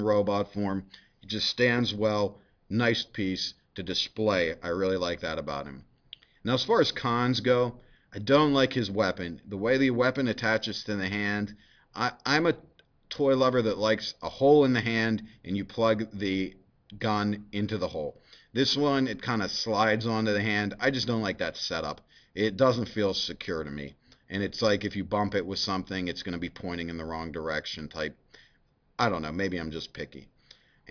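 Nothing is technically wrong with the audio in this clip.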